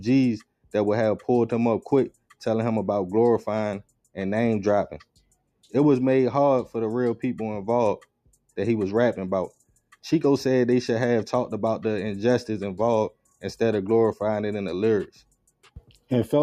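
Sound cut by the noise suppressor at 0.43–0.74, 2.1–2.36, 3.83–4.16, 5.03–5.7, 8.26–8.57, 9.51–9.96, 13.1–13.43 and 15.07–16.11 s. The suppressor mistakes wanted sound for noise and pulls it down by about 17 to 19 dB, so parts of each stretch sink and thin out. The last stretch loses the most, with well over half a second affected.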